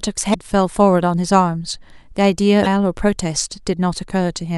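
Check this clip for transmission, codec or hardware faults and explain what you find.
Two faults show up, both damaged data in a compressed stream, at 0.30 to 0.35 s and again at 2.63 to 2.67 s, each lasting a little over 40 ms. Corrupted bytes in the encoded speech make the decoder misread those frames and lose sync until it finds a valid header, so each spot comes out as a brief chirp, squawk, click or short hole. A clean dropout or packet-loss gap would instead go silent or smear smoothly.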